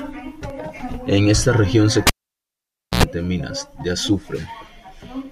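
At 0.50 s the speech has a block of digital silence about 1 ms long. A short run of samples drops straight to zero and returns with no fade, most likely because the output buffer was not filled in time. At this length it is heard as a single tick.

From 2.07 s to 3.03 s comes a cable pulled and plugged in. A pop marks the disconnect, then roughly 0.91 s of near silence, then about 89 ms of 60 Hz mains buzz as only the tip makes contact, and a second pop as the signal returns.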